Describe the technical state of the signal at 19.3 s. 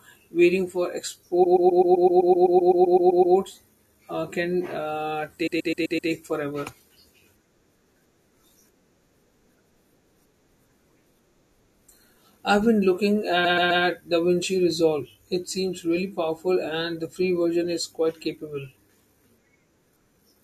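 At 19.3 s the signal is intact, with no audible technical fault at that moment.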